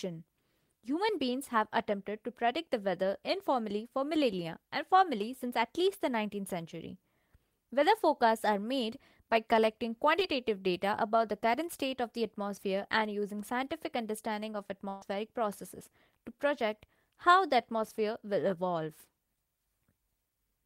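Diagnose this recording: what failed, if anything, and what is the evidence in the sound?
Network: a short concealed packet loss at 10.19 to 10.23 s gives a brief smear. About 20 ms never arrived, and the decoder extrapolated from the preceding sound.

Network: a burst of packet loss from 14.89 to 15.03 s. About 120 ms was lost, concealment held and faded the last sound, and the audio resumes past the gap.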